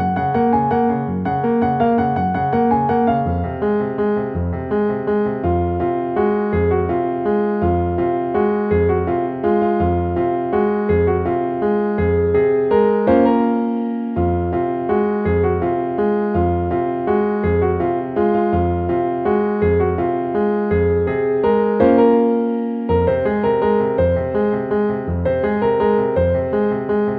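No technical faults are audible anywhere in the audio; the signal stays continuous and stable throughout.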